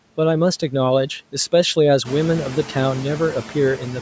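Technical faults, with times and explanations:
Throughout, noise suppressor artifacts: the suppressor lowers each frequency band it judges to be steady noise by about 12 dB, frame by frame, so the background drops between phrases and comes back beneath the speech. The room noise also grows noticeably from roughly 2 s.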